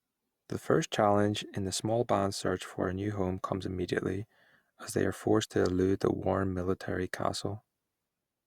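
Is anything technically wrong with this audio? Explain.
No, nothing is technically wrong with this audio.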